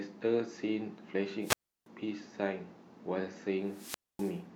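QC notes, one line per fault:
1.41–1.87 s and 3.65–4.42 s, wireless microphone squelch dropout: the radio link fades, hiss swells, then the receiver's squelch mutes for about 330 ms and 250 ms. The spectrogram shows a broadband noise haze before blank columns, and the waveform shows flat gaps.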